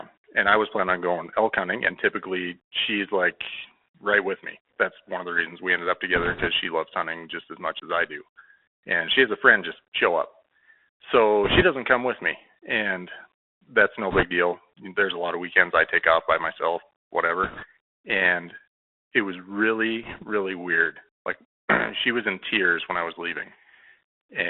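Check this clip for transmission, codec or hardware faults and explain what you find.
The clip has two faults: a narrowband headset codec throughout, and five short bursts of link corruption.

Bluetooth CVSD headset codec, throughout: one-bit up/down steps with adaptive size, consistent with 64 kbps, squeeze the speech into roughly 300 Hz to 3.5 kHz. The result is scratchy sibilants, granular hiss and audible distortion.

Bit errors on a Bluetooth voice link, at 6.15 to 6.47 s (after "reasons we ended up", before "she loves hunting just"), 11.44 to 11.63 s (before "doesn't come with me"), 14.11 to 14.24 s (after "that's no"), 17.43 to 17.65 s and 20.03 to 20.24 s. Flipped bits at a few percent each shift the waveform by one step, whose size grows with the speech level, and quickly fade, so each burst sounds like a rushing crackle rather than a click.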